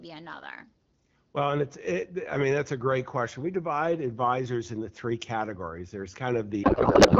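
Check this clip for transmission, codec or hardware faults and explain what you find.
One fault: a codec payload misread from 6.63 s to the end. The speech turns into garbled, warbling noise that barely tracks it. That points to octet-aligned AMR frames decoded as bandwidth-efficient, which shifts every field. Unlike packet loss, nothing drops out. Before that the AMR-WB coding sounds clear.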